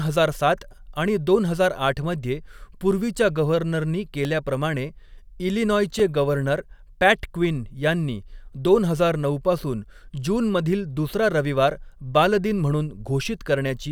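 At 4.25 s, just after "आठ मध्ये पूर्वीच्या गव्हर्नरनी", and again at 5.99 s, just before "गव्हर्नर पॅट क्विन यांनी", a repeated buffer is heard. Audio arrived late, so a tiny block of about 1.45 ms, which fits a 64-sample buffer, replayed once at 4.25 s and twice at 5.99 s. Each repeat is a hard-edged click or brief buzz rather than the silent gap of a dropout.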